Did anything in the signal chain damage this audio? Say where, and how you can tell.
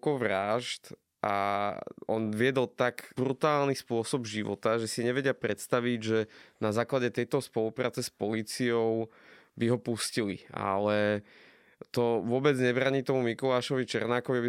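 No, nothing I can hear in this speech points to damage at any stage of the chain, so there's nothing to trace back.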